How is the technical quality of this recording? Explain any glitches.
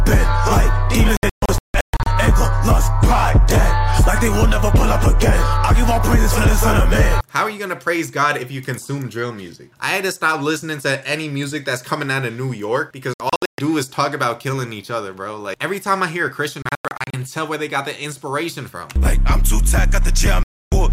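Technical quality is compromised by four digital broadcast dropouts, at 1.17–2.07 s, 13.14–13.59 s, 16.62–17.14 s and 20.43–20.72 s. Each time, the receiver muted on corrupted frames, so the sound cuts to silence, breaking into short holes of up to 160 ms in the first three and losing 288 ms in the last, and that material is lost.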